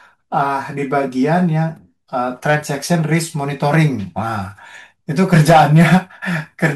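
From 5.22 to 5.97 s the speech is driven about 6 dB past what the stage can pass, causing hard clipping: peaks are sliced flat, giving a harsh, fuzzy crackle on loud syllables. The waveform shows squared-off tops, and the spectrogram shows added energy smeared upward into high frequencies.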